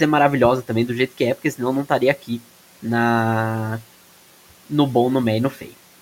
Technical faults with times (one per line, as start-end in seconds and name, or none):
2.22-2.42 speech cut by the noise suppressor
5.52-5.74 speech cut by the noise suppressor